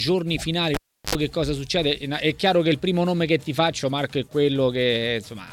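Cable pulled and plugged in at 0.74 to 1.15 s: a pop, about 0.36 s of near silence, an 80 ms burst of 50 Hz mains buzz, then another pop.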